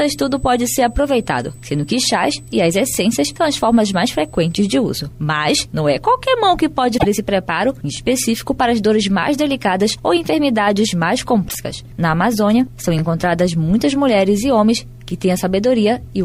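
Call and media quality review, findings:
USB whine, 0.0 to 4.72 s: steady 8 kHz tone roughly 30 dB below the signal, then gone. Leakage of 125 µs USB microframe current through power or ground. Spectrogram shows a thin, unbroken horizontal line at 8 kHz; waveform shows nothing.

Overlapping chunks, 2.95, 7.97 and 12.99 s: a 20 ms slice plays twice at each join, heard as a click or stutter every 5 s. Each 5 s chunk starts 20 ms before the previous one ends. Waveform shows a repeated 20 ms segment; spectrogram shows a vertical seam.

Broken MP3 bit reservoir, 6.97 to 7.06 s and 11.48 to 11.55 s: the audio jumps ahead, and a short burst of garbled noise or chirp follows, about three to four 24 ms frames long. Likely cause is dropped frames, so the following frames read borrowed bits from the wrong frame. Spectrogram shows a broadband smear; waveform shows a discontinuity.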